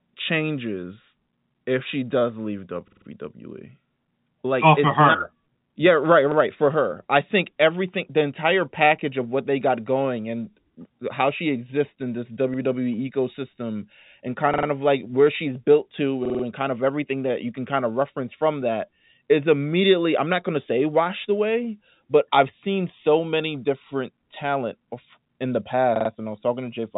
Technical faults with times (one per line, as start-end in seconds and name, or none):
2.88-3.06 repeated buffer
6.32-6.36 repeated buffer
14.54-14.68 repeated buffer
16.25-16.44 repeated buffer
25.96-26.10 repeated buffer